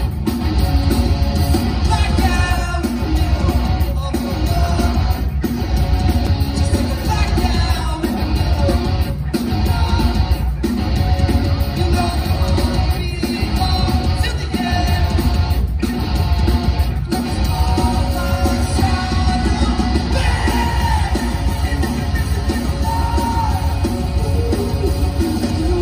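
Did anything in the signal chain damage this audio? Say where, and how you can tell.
Yes. Two discontinuities, at 3.41 s and 6.27 s, point to the driver or buffer stage. Each is a small jump in the sound with no gap, skipping roughly 4 ms and under 2 ms. That is likely a dropped buffer (overrun): samples were overwritten before being collected.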